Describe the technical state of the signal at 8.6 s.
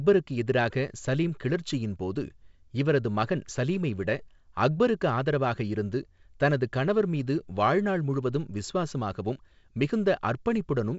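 At 8.6 s the speech is intact, carried by G.722 wideband telephone coding at 56 kbit/s, with nothing heard above about 7.7 kHz.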